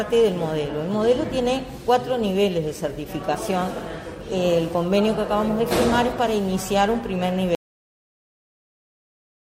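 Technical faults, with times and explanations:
7.55 s to the end: audio dropout to silence. The sound cuts off abruptly mid-flow and never returns, leaving about 2 s of silence with no room tone at all. The input was likely lost while recording carried on writing silence.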